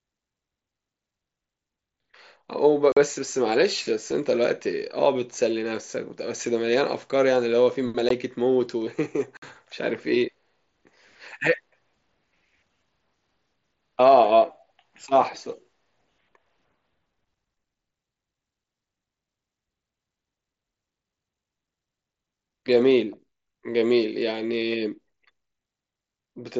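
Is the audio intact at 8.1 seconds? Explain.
No. Unconcealed Bluetooth headset packet loss hits at 8.09 s. A 15 ms gap, which fits two lost packets, is filled with silence or an idle pattern, making an abrupt hole.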